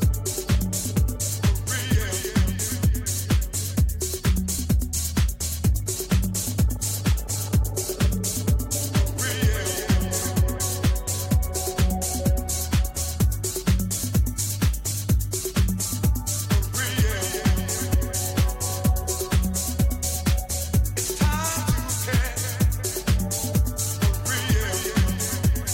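At 4.58 s and again at 17.93 s the audio gives a brief glitch, each lasting under 20 ms. Both are damaged data in a compressed stream: corrupted bytes make the decoder misread a frame and output garbage until it finds the next valid frame header. A buffer dropout or clipping click would be a gap of silence or a plain tick. These bursts are short blips.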